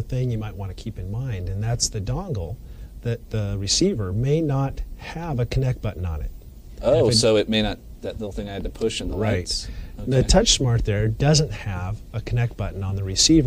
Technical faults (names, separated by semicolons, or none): none